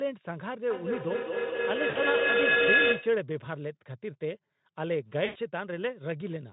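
Feedback howl runs from 0.7 to 3.23 s. Two devices sharing the room form a microphone-to-loudspeaker loop that adds level on each pass, so the repeats grow instead of dying away and narrow to the loop's preferred frequency, around 1.5 kHz. The tone climbs to about 7 dB above the speech at its loudest, and the loop's round-trip delay is roughly a fifth of a second.

VoIP packet loss concealed by the speech codec appears at 1.89 to 1.97 s, inside the howl, and again at 5.25 to 5.37 s. The gaps last 60 ms and 100 ms, which fits three and five 20 ms frames. The Speex decoder filled each gap by extending its last pitch and filter settings while lowering the gain. This turns the speech into a brief buzzy tone or coloured noise that fades, and the speech stays thin for a short stretch after the packets resume.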